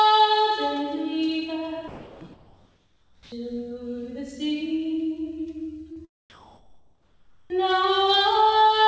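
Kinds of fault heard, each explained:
Sound dropped by the voice detector: From 1.88 to 2.21 s, about a third of a second of real sound gives way to steady, featureless noise, then returns. The sender's voice activity detector likely classed this stretch as background and stopped transmitting, so the receiver filled the 330 ms gap with synthetic comfort noise. Whatever was playing there is simply absent, not attenuated.
Comfort noise in place of the background: During the pauses from 2.33 to 3.32 s and from 6.30 to 7.50 s, the natural background is swapped for smooth, detail-free hiss. This is likely discontinuous transmission, where the receiver synthesises noise roughly matched to the background's spectrum. In the first pause the fill sits about 5 dB below the real background. In the second it is about 1 dB above it, so the change there is one of texture more than level.
Onset clipped by the voice detector: At 3.30 s and again at 7.48 s, sound resumes without its soft beginning, with the first 20 ms or so cut off, so each entry starts abruptly out of the comfort noise. 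The detector was likely slow to register that sound had restarted, and the opening moments were never sent. Both clipped onsets fall right where the comfort-noise pauses end.
Short concealed packet loss: Around 5.93 to 5.99 s, roughly 30 ms of audio failed to reach the decoder in time. The receiver bridged the hole by extrapolating the preceding sound and then crossfading back into the real signal. This is heard as a brief smear or wobble at that point rather than a silent gap.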